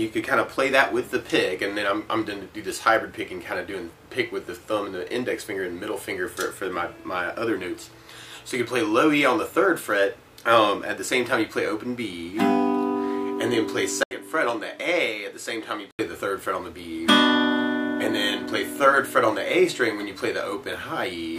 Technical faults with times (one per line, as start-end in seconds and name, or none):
14.03-15.99 input switched to a poorer device